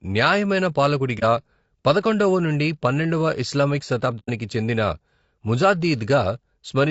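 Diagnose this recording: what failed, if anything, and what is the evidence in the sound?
Low-delay AAC compression throughout, a codec-stage fault: the speech sounds plainly rough and grainy, likely from AAC-ELD running at around 32 kbps.

AAC frame loss with muting, a network-stage fault, at 1.19–1.23 s and 4.19–4.30 s: a brief dip, then a soft-edged hole, which fits one lost 30 ms frame, then three, zeroed by the decoder.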